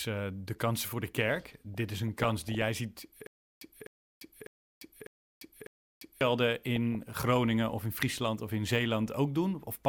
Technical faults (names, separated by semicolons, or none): stutter with silent gaps; DAB burbling